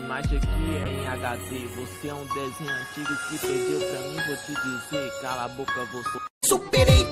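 From 0.85 to 2.27 s there is a call bitrate drop. The encoder was pushed to far fewer bits, which fits a fall from around 48 to 18 kbps, held for about 1.36 s. The sound turns coarse and muffled, with highs cut, until recovery.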